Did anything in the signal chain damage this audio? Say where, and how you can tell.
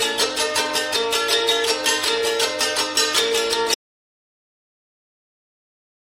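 Yes. An audio dropout to silence starts at 3.75 s and lasts to the end. The sound cuts off mid-flow. What follows is silence, with no room tone. The likely cause is a lost input link, with the recorder still writing samples.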